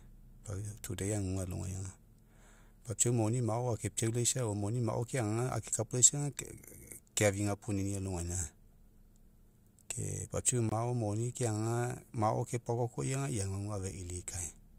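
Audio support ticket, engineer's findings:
Block of digital silence at 10.69 to 10.72 s, after "ke papiau", before "moni keagaga mao". Speech drops to silence for about 23 ms, then returns. No fade. Heard as a short hole. Probable component: audio output stage. Buffer not filled in time. Gap length fits a 1024-sample buffer.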